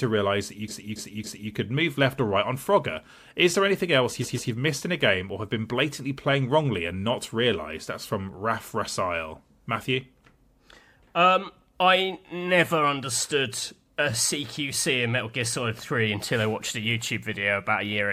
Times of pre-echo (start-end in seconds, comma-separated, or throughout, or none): none